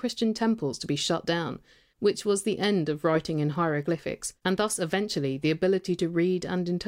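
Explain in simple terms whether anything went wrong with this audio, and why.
Nothing went wrong with this speech recording, and no technical fault can be heard at any point. There is nothing in it that needs explaining or fixing.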